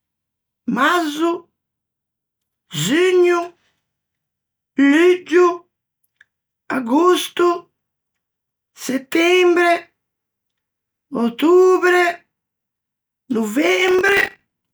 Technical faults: processor overload crackle

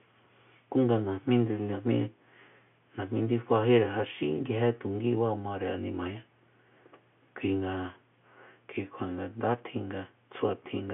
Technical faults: none

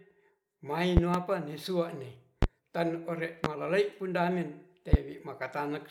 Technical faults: loud pop

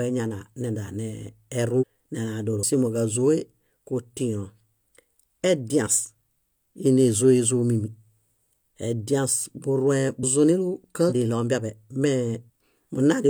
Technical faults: damaged data in a compressed stream; audio missing between chunks

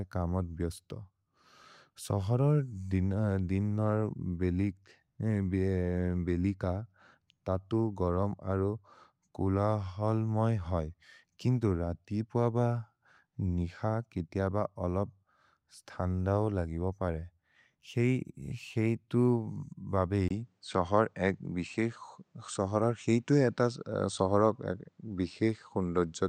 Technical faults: input switched to a poorer device

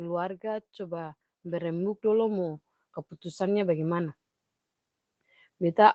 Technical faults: automatic gain rising

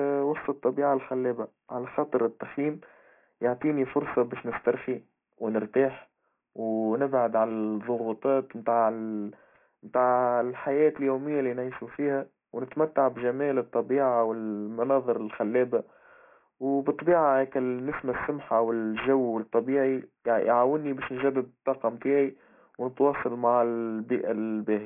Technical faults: aliasing

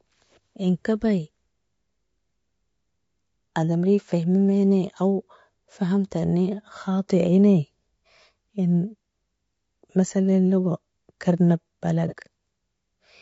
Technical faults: low-delay AAC compression; AAC frame loss with concealment

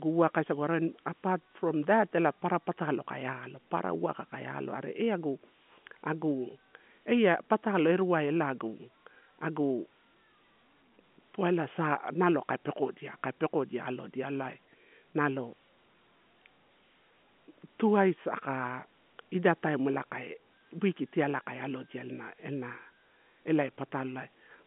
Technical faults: none

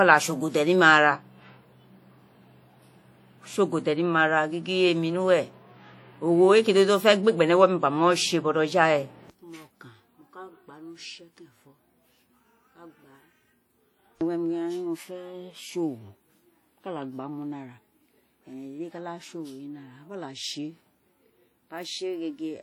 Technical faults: WMA compression

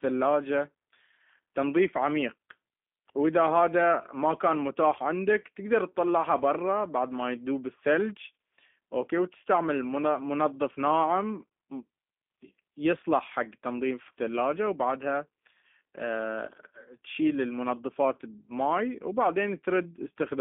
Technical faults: G.729 codec

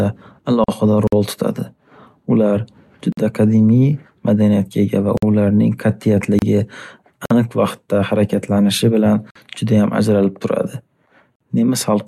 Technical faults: gap at a join of encoded pieces; gap between chunks

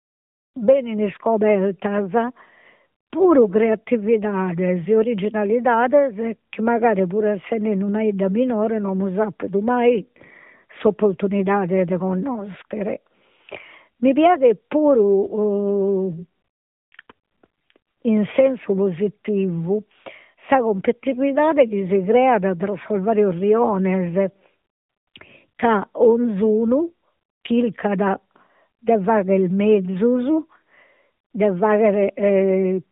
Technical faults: AMR narrowband mobile codec

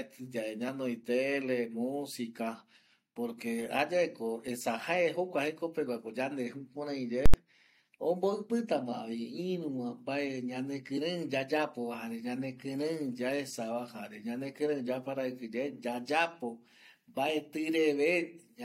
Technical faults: invalid numbers at full scale

